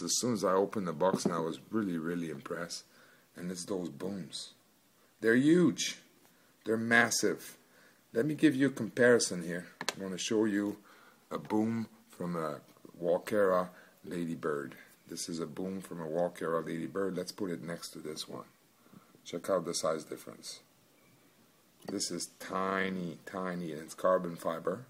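No technical faults are audible anywhere in the sound.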